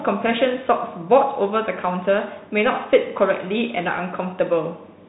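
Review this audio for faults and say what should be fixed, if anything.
Bluetooth CVSD headset codec throughout the speech: one-bit adaptive delta coding cuts everything above 3.8 kHz, leaving a flat spectrogram ceiling there, plus grainy hiss and scratchy s sounds. Fix it by recording through a wideband headset profile or a wired microphone.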